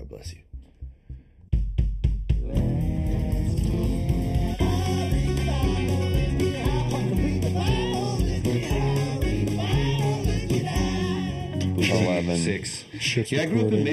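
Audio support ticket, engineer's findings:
Channel delay (comb filtering), whole clip: hollow, phasey colouring with fixed notches, the first around 1.5 kHz and more evenly spaced above it. One side is running under half a millisecond late before the mono sum, so shared content cancels. Check channel alignment upstream.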